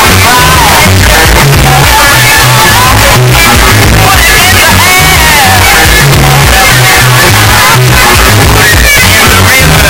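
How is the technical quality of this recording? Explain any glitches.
Poor, I'm afraid: the whole recording is a wall of harsh, maxed-out distortion. Throughout, it sounds like a signed and unsigned mix-up, likely 8-bit samples read with the wrong sign convention. That flips the top bit, so every zero crossing jumps across the full range and even the quiet stretches come out as loud as everything else. The 8-bit format itself is fine; it's just being interpreted wrongly.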